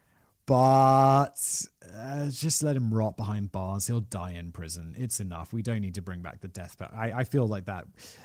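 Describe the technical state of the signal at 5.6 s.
At 5.6 s the signal is intact, with no dropout, click, distortion or other fault at that point.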